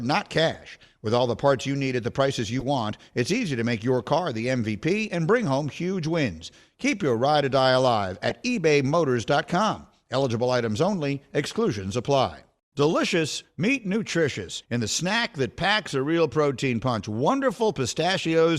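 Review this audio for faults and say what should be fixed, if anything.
Short bursts from corrupt frames being decoded occur at 0.53–0.56 s, 1.59–1.62 s, 2.59–2.65 s, 8.29–8.32 s, 10.22–10.25 s and 18.17–18.20 s. Each is a brief chirp or noise blip lasting a few tens of milliseconds, spanning one to a few frames. The decoder accepted damaged bitstream data and rebuilt it with wrong gains and spectral values. The loudest, near 8.3 s and 18.2 s, reach roughly -15 dBFS. Adding checksum verification with frame concealment would stop damaged frames being played.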